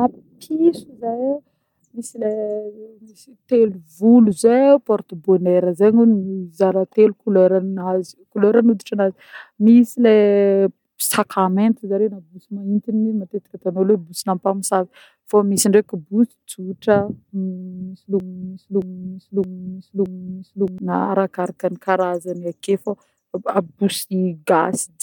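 A broken-record loop runs from 18.20 to 20.78 s: a 0.62 s fragment of speech repeats four times back to back, likely from a stalled player resending its last buffer.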